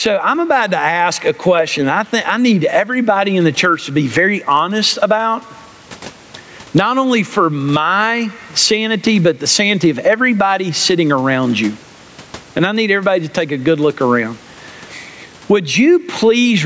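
Gain pumping runs through the whole speech recording, with the level lurching by around 15 dB. This is likely caused by the input gain being set far too high and a fast limiter or compressor clamping down on every loud peak. Loud and quiet passages end up squashed together, and the room noise sits about 40 dB below the speech.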